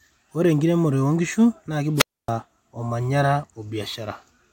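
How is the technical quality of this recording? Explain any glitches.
The recording has one clear glitch: a wireless microphone squelch dropout between 1.95 and 2.31 s. The radio link from the transmitter weakened enough that the receiver's squelch circuit cut its output rather than pass raw RF noise. The speech breaks off into a hole of near silence lasting about 270 ms, then resumes once the signal recovers and the squelch reopens.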